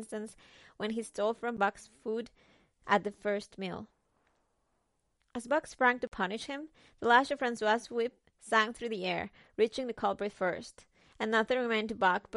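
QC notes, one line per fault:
Throughout: MP3 compression, plainly audible. Nothing above 11.2 kHz survives, so the top of the speech sounds dull, and the remaining band has a watery, swirly quality, with s sounds turning metallic and consonant onsets smeared. The likely cause is a low-bitrate MP3 encode, around 48 kbps. On a spectrogram there is a flat ceiling at 11.2 kHz, with patchy holes and isolated blobs below it where weak lines drop in and out between frames.
1.57 s and 6.07 to 6.12 s: block of digital silence. At 1.57 s the signal drops out for about 12 ms, which fits a 512-sample buffer. At 6.07 s it drops out for about 46 ms, which fits a 2048-sample buffer. Each cut and return is abrupt with no fade. The short gap is heard as a tick and the longer one as a brief hole. The waveform shows flat near-silent segments with sharp vertical edges. The spectrogram shows thin broadband lines at each edge.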